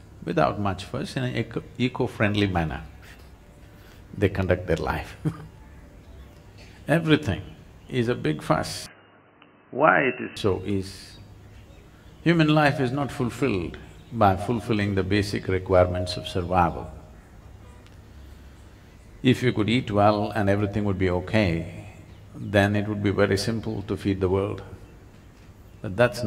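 From 8.86 s to 10.37 s the sound abruptly turns dull and boxy, then clears again, with no gap at either transition and little change in loudness. Everything above 3 kHz disappears, and a faint new background noise sits far beneath the signal. The likely cause is an input switched to a poorer device. On a spectrogram the upper band is sharply cut off at 3 kHz for that stretch, while the waveform envelope stays continuous.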